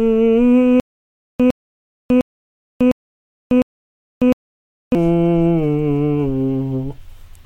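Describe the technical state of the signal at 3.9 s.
At 3.9 s the music sits inside a stutter with silent gaps running from 0.80 to 4.95 s. The player or stream likely stalled, and on each retry it replayed the last 108 ms fragment before running dry. That produces the same short burst of music recurring every 705 ms, repeated five times, each followed by about 597 ms of dead digital silence. The music that should have filled this stretch never arrives.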